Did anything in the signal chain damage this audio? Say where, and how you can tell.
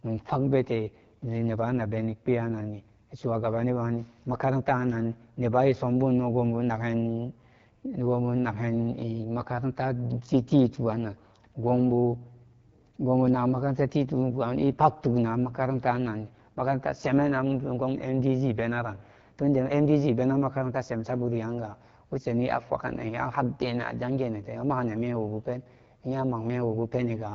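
Yes, at the codec stage: an AMR wideband (HD Voice) codec throughout the speech. Plainly rough, raspy texture and nothing above 7.3 kHz point to a low rate near 8.85 kbit/s.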